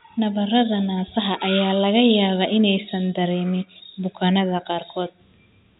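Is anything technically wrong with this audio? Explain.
No, nothing is technically wrong with this audio.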